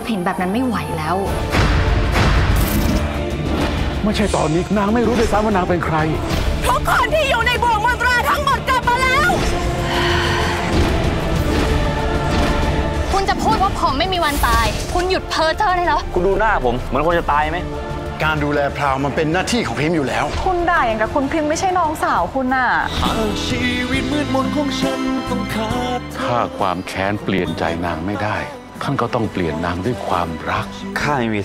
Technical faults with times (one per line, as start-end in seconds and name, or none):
0.94-29.59 clock drift buffer slips